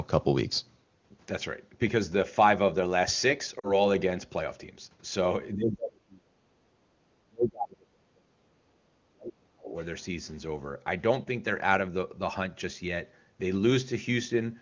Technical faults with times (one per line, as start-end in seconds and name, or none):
3.59-3.79 lost AMR speech frames
5.54-6.93 speech suppressed in double talk
7.26-8.72 speech suppressed in double talk
8.97-9.75 speech suppressed in double talk